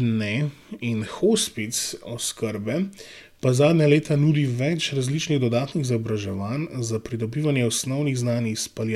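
A short speech recording with no technical faults. Nothing in the signal chain can be heard going wrong at any point in the clip.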